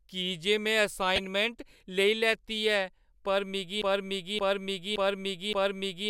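From 1.16 to 1.25 s the speech breaks into DAB burbling: bit errors slipping past error correction corrupt sample values and scale factors, so individual sub-bands lurch in level. The brief burbling, spread over what sounds like a few frames, differs from a dropout because the signal stays present.

From 3.82 s to the end, a 0.57 s fragment plays back to back four times in a broken-record loop, with the intended speech lost. The exact, seamless repetition sets it apart from an echo or stutter, and is likely from a stalled player or stream resending its last buffer.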